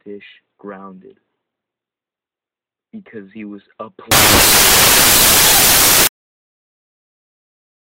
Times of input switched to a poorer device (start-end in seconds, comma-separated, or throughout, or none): none